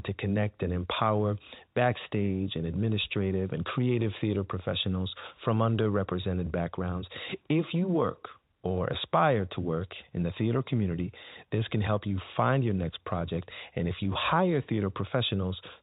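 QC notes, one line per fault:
No faults found.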